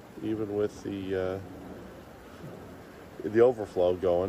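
No technical faults can be heard anywhere in this audio.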